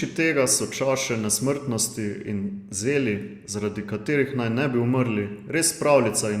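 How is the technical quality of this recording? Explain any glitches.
The technical quality of the recording is sound, with no glitches to explain.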